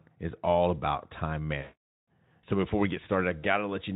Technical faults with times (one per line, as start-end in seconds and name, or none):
1.62-2.07 VoIP packet loss concealed by the speech codec
3.39-3.45 VoIP packet loss concealed by the speech codec